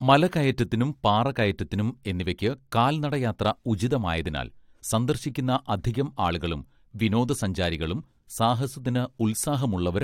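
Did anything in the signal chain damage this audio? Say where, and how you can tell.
No, nothing in the signal chain damaged this audio.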